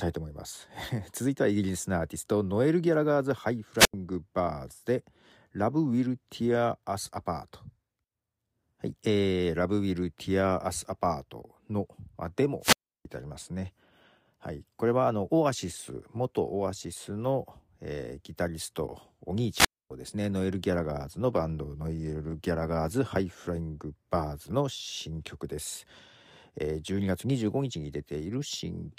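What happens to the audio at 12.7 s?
At 12.7 s the speech falls into a wireless microphone squelch dropout lasting from 12.60 to 13.05 s. The radio link from the analogue FM transmitter weakens until the receiver's squelch shuts the output off for about 0.33 s. You hear a short surge of hiss or static, then a hole of near silence, then the speech returning. On a spectrogram, a brief broadband noise smear gives way to an almost empty gap before the speech harmonics reappear. The waveform flattens to nearly zero through the mute.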